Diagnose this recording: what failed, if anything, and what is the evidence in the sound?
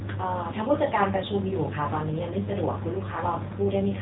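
Buzzy, synthetic speech cut off above 3.8 kHz throughout: codec-stage AMR narrowband mobile codec, its few-pulse vocal-tract model fitting a low mode near 7.4 kbps.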